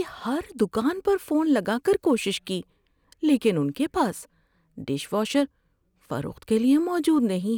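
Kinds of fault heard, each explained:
Sample clock jitter: the converter's timing wanders by roughly a couple of microseconds, so each sample lands slightly off time. Across this speech the resulting error sits around 40 dB below the signal, a faint hiss that thickens on loud, bright passages and disappears in pauses.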